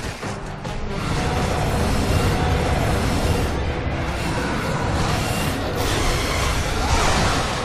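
From 1.15 s to 4.59 s the audio carries a doubled audio track: a second full-band copy runs roughly a second behind the original at about the same level, so every sound returns as a clean repeat with no decay or room colour. It starts and stops abruptly at those edges. On a spectrogram the whole pattern reappears shifted right by about a second, and the waveform shows two overlaid envelopes. The likely cause is the same signal being captured a second time through a slower path.

At 3.33 s, inside the doubled stretch, there is a gap between stream segments: a hole of about 3.7 ms where the time stamps of two segments fail to meet and the player fills the space with silence. It sounds like a tiny tick or dropout. The waveform shows a flat, hard-edged notch and the spectrogram a thin vertical blank column. No audio is lost, only delayed, and the position points to segments about 4 s long.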